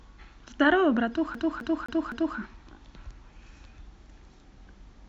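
From 1.35 s to 2.38 s the speech stutters mechanically, repeating the same 0.26 s fragment four times with a brief mute at each jump. It is the CD stuck on one turn fault: a scratch keeps throwing the laser back one track, replaying that slice.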